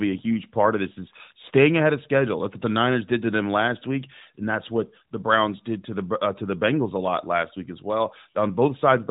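There are no technical faults to describe in time order in this speech clip.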